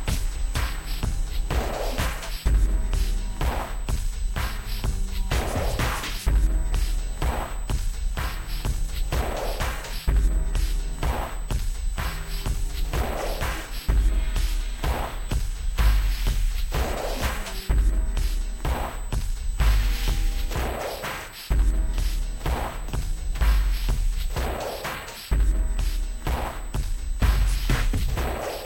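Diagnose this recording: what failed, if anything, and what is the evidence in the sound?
The failure is in the analogue wiring, where there's a steady USB whine at 8 kHz throughout, sitting roughly 25 dB below the sound. That pitch lines up with the bus's 125-microsecond microframes, whose pulsed current draw is leaking in through the power or ground path.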